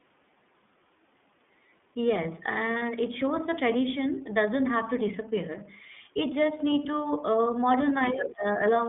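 Throughout, the speech carries the iLBC codec sound: the band runs only from about 150 Hz to 3.5 kHz, and the voice has a slightly rough, synthetic edge, which fits the 13.33 kbps mode with 30 ms frames, each coded independently of the last.

From 2.79 to 2.83 s there are lost iLBC frames. A 30 ms gap, consistent with a single dropped frame, is filled by a repeated pitch cycle mixed with noise, heard as a brief buzzy held vowel before the voice returns cleanly on the next frame.

Between 8.03 and 8.29 s, the other side's voice leaking through appears as a second voice sitting only a few dB below the main speech. This is likely loudspeaker playback picked up by the microphone and left uncancelled by the echo canceller.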